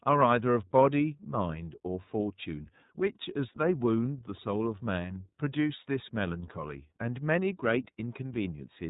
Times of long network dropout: none

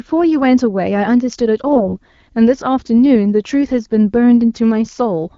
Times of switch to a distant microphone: none

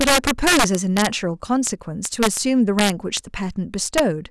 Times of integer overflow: 0.01-1.07, 1.67, 2.05-2.37, 2.79-3.17, 3.98

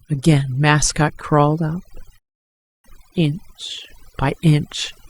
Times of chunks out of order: none

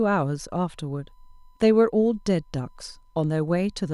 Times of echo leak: none

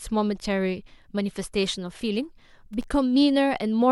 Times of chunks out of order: none

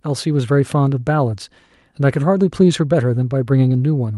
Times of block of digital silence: none

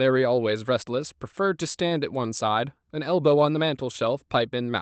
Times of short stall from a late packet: 1.87-1.93

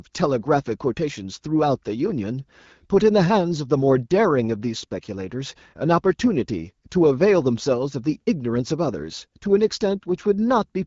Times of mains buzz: none

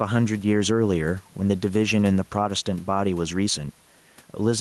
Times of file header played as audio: none

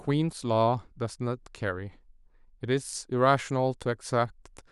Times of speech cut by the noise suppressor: none

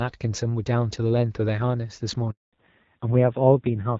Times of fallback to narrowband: 2.53-3.99

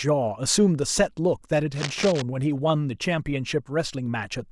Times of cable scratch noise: 1.72-2.22

